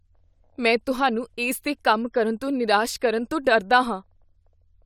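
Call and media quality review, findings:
No audible faults found in the speech recording. Nothing here calls for a ticket entry.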